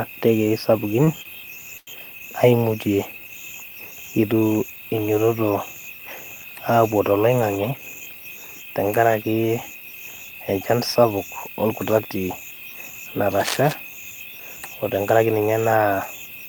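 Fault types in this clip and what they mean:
Short stall from a late packet: The speech briefly freezes, with a sound held too long and a faint buzz or dip, at 1.04 s and 1.23 s (each stretched by about 25 ms) and more noticeably from 1.77 to 1.89 s, where roughly a tenth of a second is drawn out. A packet arrived late, the jitter buffer ran dry, and the receiver prolonged the last sound until it came, then resumed where it left off with nothing lost.
Jitter buffer speed-up: Speech sounds hurried at unchanged pitch from 7.57 to 8.02 s, running at about 113% speed, and again from 14.81 to 15.48 s at about 111%. The buffer had built up more audio than it targets, so the receiver trimmed short pitch-period-sized slices over and over to shrink the delay, cutting somewhere around 70 ms in the first stretch and around 100 ms in the second.
Cable scratch noise: From 13.40 to 13.80 s a dense, uneven scratching and rustling sits over the speech, only about 5 dB below it, so it is clearly heard for that moment. 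The likely cause is a worn cable, connector or control being moved, its contact resistance jumping rapidly and injecting irregular bursts of noise into the signal.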